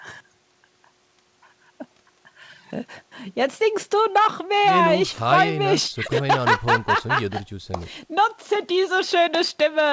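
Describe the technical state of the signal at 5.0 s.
At 5.0 s the speech is intact, carried cleanly through the call path, whose band stops at 8 kHz in the way a G.722 wideband codec would shape it.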